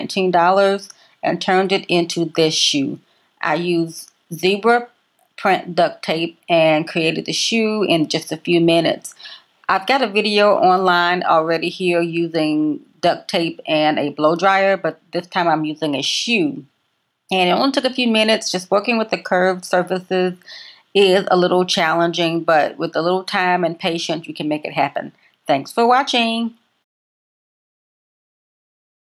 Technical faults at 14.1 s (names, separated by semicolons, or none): gain pumping